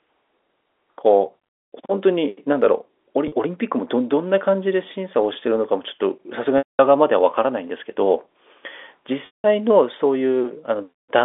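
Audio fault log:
3.28 s to 3.32 s, packet loss with pitch repetition: a 40 ms gap bridged by repeating the last pitch period, heard as a briefly held, slightly buzzy tone.
6.58 s to 6.79 s and 9.26 s to 9.44 s, packet loss with pitch repetition: 210 ms and 180 ms gaps; the repeated pitch period fades over about 50 ms into silence, then speech cross-fades back.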